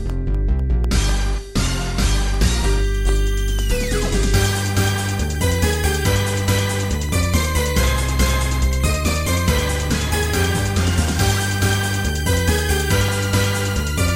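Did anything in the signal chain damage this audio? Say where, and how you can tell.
Yes. The damage is at the driver or buffer stage: periodic USB or driver dropouts. From 0.10 s to 14.09 s, ticks recur every 0.25 s. Each is roughly half a millisecond of audio lost and replaced by silence, as a recurring task briefly stalls the USB or driver path.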